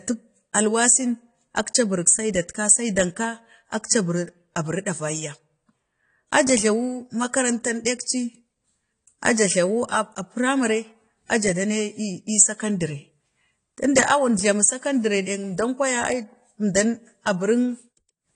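Dull, smeared speech runs from start to finish, with a warbling, fizzy texture on sibilants and held vowels, and nothing at all above 10 kHz. The likely cause is AAC compression, specifically AAC-LC at a low bitrate, around 32 kbps. Without enough bits, the encoder lowers its cut-off and coarsely quantises the frequency lines in each frame, so fine detail drops out or turns to shifting noise, making the damage plainly audible.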